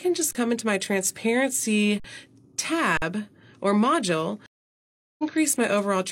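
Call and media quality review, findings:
Underrun with held sample at 0.33 s (23 ms), 2.00 s and 2.97 s (46 ms each). Playback output buffer starved, so the converter froze on its last value. The waveform shows flat segments. Gap lengths fit 1024- and 2048-sample buffers. Audio is lost during each hold.

Stream reconnect at 4.46–5.32 s. The connection dropped and the player went silent for 723 ms, then reconnected with a fresh decoder mid-stream. The spectrogram shows a blank band. The audio resumes about half a second later than where it stopped, a jump consistent with a live stream.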